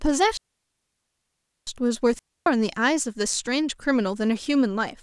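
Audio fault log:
0.37–1.67 s and 2.19–2.46 s, digital wireless dropout: the speech cuts out twice into clean near silence, first for 1.3 s, then for about 0.27 s, with no hiss, crackle or burst on either side of each gap. The wireless receiver lost too much of the digital stream to rebuild the audio, so it muted with a very fast fade instead of passing on damaged data, leaving tidy holes rather than noisy breakups.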